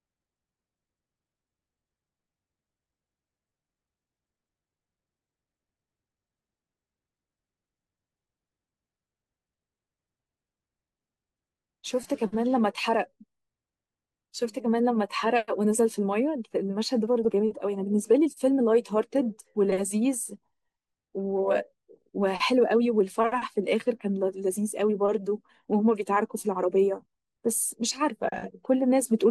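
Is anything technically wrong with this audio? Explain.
Yes, two problems. Throughout the speech there's dull, gurgly, granular distortion, likely MP2 compression: upper sub-bands get switched off and the rest coarsely quantised, which fits roughly 80 kbps. At 17.25 s there's a brief burble, DAB burbling: a few bit errors slip past error correction, putting short blips of noise into individual sub-bands.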